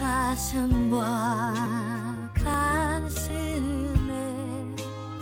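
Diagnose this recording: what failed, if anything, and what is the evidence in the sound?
Abrupt forward jumps in the sound occur at 1.66 s, 2.54 s and 3.3 s, with no gap of silence. This points to the driver or buffer stage, likely a dropped buffer (overrun): unread samples were overwritten and the edges spliced, losing roughly 20 ms at the first and about 70 ms at each later one.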